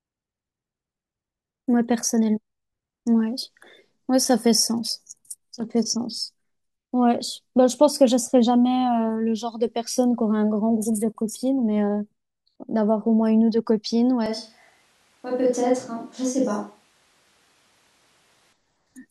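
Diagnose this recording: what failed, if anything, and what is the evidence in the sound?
At 14.26 s the speech abruptly turns roomy and hollow, with thinner bass, and stays that way until 18.53 s, where it snaps back to the close sound. This points to a capture-stage fault, most likely a switch to a distant microphone after the close microphone dropped out. The level barely changes, and room noise sits around 40 dB below the speech.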